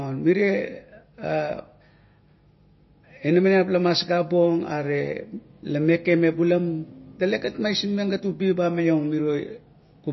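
MP3 compression throughout: the speech has nothing above 5.8 kHz and sounds watery and swirly, likely from an encoder starved at a bitrate near 25 kbps, discarding weak frequency detail.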